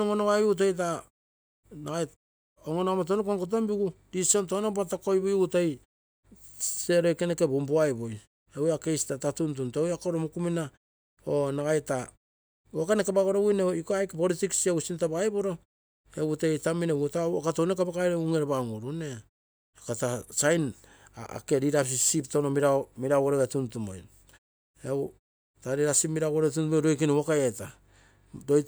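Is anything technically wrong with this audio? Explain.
No, nothing in this speech recording stood out as a technical problem on listening.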